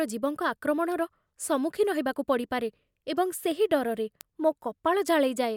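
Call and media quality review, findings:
Word clock ticks on speech, 0.26 to 5.52 s: about ten sharp, single-sample clicks, roughly every 0.7 s, uneven strength. Probable component: digital input receiver free-running, not locked to source clock; around 30 ppm drift slips one sample per crossing.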